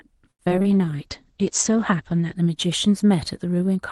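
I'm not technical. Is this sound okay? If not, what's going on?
No, there are three problems early on in this speech recording.

Repeated packet loss (robotic sound), 0.31 to 0.66 s: six pieces of audio went missing, and the gaps were patched by stretching nearby sound, so it turns choppy and robotic.

Jitter buffer slow-down, 0.67 to 1.32 s: the receiving end ran short of audio and repeated tiny slices to build up a reserve, so the speech plays at about 93% speed, drawn out.

Call bitrate drop, 0.70 to 2.42 s: the connection weakened, so far less detail was sent. The voice sounds rougher and more muffled, with the top end cut back to 8 kHz.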